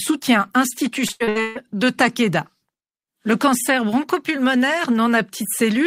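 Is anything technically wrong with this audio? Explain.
Yes. From 1.07 to 1.57 s there is repeated packet loss. About 340 ms of the speech went missing across five gaps, each filled by stretching the previous sound. The result is choppy and robotic.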